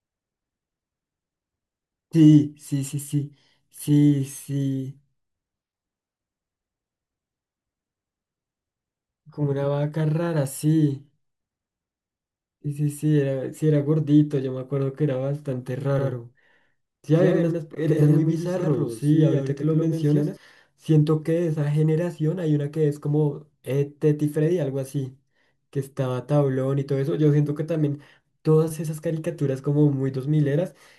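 Speech clip with a doubled audio track from 15.99 to 20.37 s: a full copy trails roughly a tenth of a second behind, about 5 dB down, likely a second capture path.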